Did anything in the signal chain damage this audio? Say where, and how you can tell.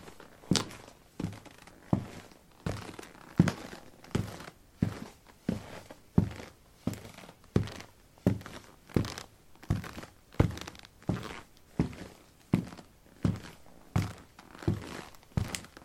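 No, nothing in the signal chain damaged this audio.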